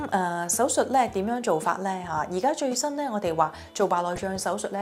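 Right near the end, from 4.13 to 4.21 s, there's a short burst of DAB burbling, short noise blips in single sub-bands from bit errors of a fraction of a percent slipping past error correction, probably across about eight corrupted frames.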